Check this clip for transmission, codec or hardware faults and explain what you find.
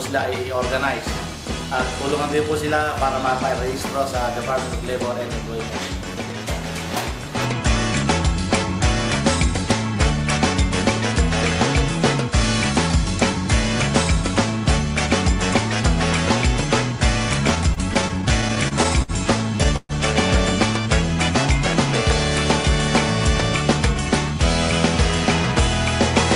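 Two network-related faults occur late in the clip, one right after the other.

Repeated stalls (stutter) run from 17.47 to 19.11 s. Packets kept reaching the receiver late, so its jitter buffer emptied fourteen times. Each time, the last fragment of sound was stretched to cover the wait, about 230 ms in total, or roughly a seventh of that stretch, with the longest hold at 60 ms. Nothing is lost, but the audio hiccups and drags.

A call audio freeze follows at 19.76 to 19.92 s. The sound stops moving forward, and a held continuation of the last moment fills about 127 ms. It fades into roughly 20 ms of silence before the audio resumes exactly where it left off. The likely cause is a delayed burst of packets that drained the buffer, leaving the rest of the clip about 127 ms later than before.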